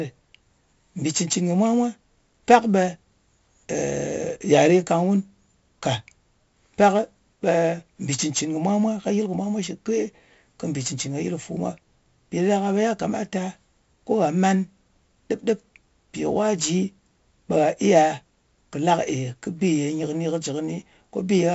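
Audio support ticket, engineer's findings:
Whole clip: audio passed through 4-bit ADPCM compression, around 64 kbps, fitting a 16 kHz rate. Heavy level-tracking gritty hiss on loud speech, smeared attacks, nothing above 7.7 kHz.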